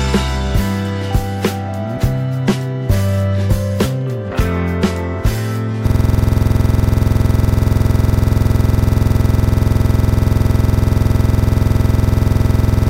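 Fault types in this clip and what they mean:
System hang loop: the computer or its driver froze while the audio hardware kept replaying its ring buffer, so from 5.87 s to the end one 46.44 ms slice, which fits a 2048-sample buffer, repeats exactly, giving a rattling stutter at 21.5 Hz.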